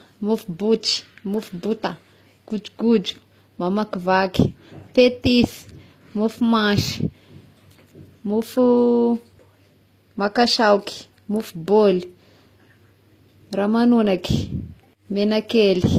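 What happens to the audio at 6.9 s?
At 6.9 s, as throughout the clip, the speech has nothing above 15.6 kHz and carries two kinds of compression artefacts at once, which points to transcoding between lossy codecs, likely a low-bitrate HE-AAC encode re-encoded as Opus. A single codec would leave only one kind of artefact.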